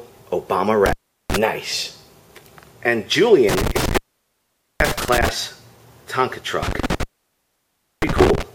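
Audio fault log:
0.86–1.36 s, 3.49–5.29 s, 6.63–8.43 s: intermittent contact. A loose plug or cable keeps opening, for 0.37 s, 0.83 s and 0.99 s, so the sound drops to faint hiss with crackle at each break.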